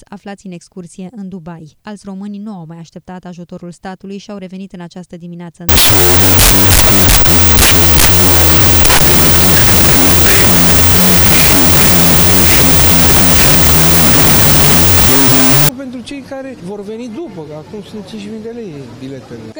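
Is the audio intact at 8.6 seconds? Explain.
No. From 5.69 to 15.69 s, wrong sample width: 16-bit samples read as unsigned 8-bit split into mismatched bytes, giving loud noise over a buried, half-speed, octave-lower signal. The spectrogram shows broadband noise.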